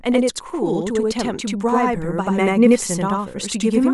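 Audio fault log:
Throughout, channel delay (doubling): one channel of the signal path is arriving late by about 85 ms, which fits a 4096-sample buffer being held on that side, and the two channels are then summed to mono. Because the gap is far longer than the ear's fusion window, the late copy does not blend in as colouration; it stands apart as a second, equally loud repeat of the speech, heard as a doubled voice or a single slap echo trailing each syllable.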